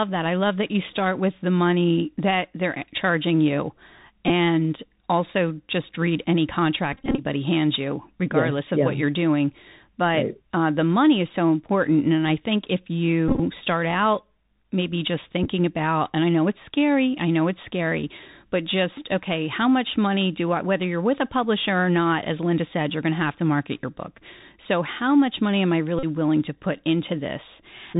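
Bluetooth CVSD headset codec, throughout the 28-second speech clip: the audio passes through a 64 kbit/s one-bit delta coder that only signals up or down each sample while adapting its step size. Everything above 4 kHz is missing, giving a muffled telephone band. Where loud high-frequency energy rises faster than the step can follow, the speech distorts, s sounds turn scratchy, and a grainy hiss sits beneath it.

Bluetooth headset packet repeated, first at 4.28 to 4.30 s, then 6.93 to 7.24 s, 13.28 to 13.40 s, 15.44 to 15.48 s and 25.99 to 26.05 s. Lost voice packets were replaced by decoding the previous packet's bits again. About 15 ms is lost at 4.28 s, heard as a brief buzz. From 6.93 s, about 154 ms is lost in scattered runs of up to about 20 ms, and the longer runs make a short buzz near 267 Hz from the 3.75 ms repeat. The later events lose about 75, 23 and 41 ms respectively.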